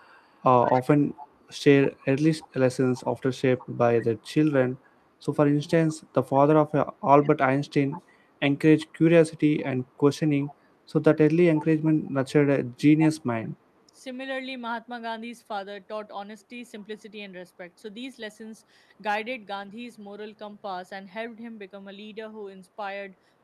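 An echo leak, likely from an echo canceller missing loudspeaker pickup, sends back a faint copy of the speech 158 ms late at 0.02–1.48, 2.01–4.32, 7.22–7.28, 7.91–8.02, 8.82–8.86, 10.2–10.55, 12.06–12.11 and 13.0–13.47 s. It is quietest around 12.1 s and most prominent at 13.0–13.47 s.

At 19.55–19.69 s, a lost packet rebuilt from error correction replaces missing audio with low-bitrate copies, which fits four lost packets. About 80 ms sounds rougher and noisier, though without a gap.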